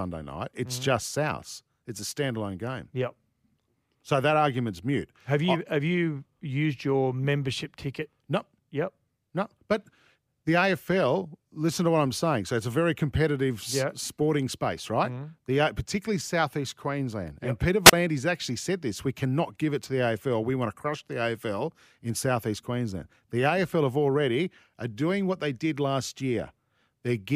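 A speech clip with a single wireless microphone squelch dropout between 17.85 and 17.93 s: a short burst of hiss rises, the sound falls into a hole of near silence lasting about 34 ms, and the voice comes back on "actually said this we". The radio signal from the analogue FM microphone faded far enough that the receiver's squelch cut the output, then reopened as the signal recovered.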